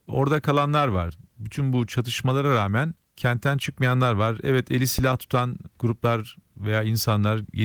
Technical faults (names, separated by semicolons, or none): phantom power thump